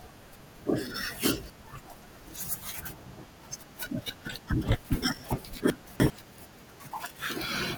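At 5.7 s the speech jumbles for about 0.4 s because of chunks out of order. A 100 ms chunk plays three chunks late, after audio that should have followed it. At 6.7 s a second 0.2 s stretch swaps two neighbouring chunks. Nothing is missing, but each misplaced chunk adds three hard joins. On a spectrogram, formant tracks break off and restart at vertical seams at the joins. The waveform shows sudden amplitude steps at those joins.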